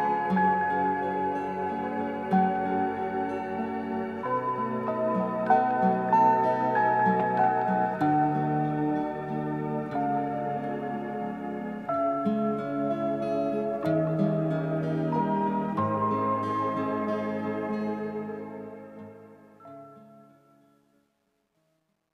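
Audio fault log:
17.71–22.13 s: truncation distortion on the fade-out, which runs from about 17.7 s to 22.1 s. The level stage drops fine detail without dither, which fits an 11-bit path. Quiet waveforms become coarse steps. From 19.7 s the tail turns gritty.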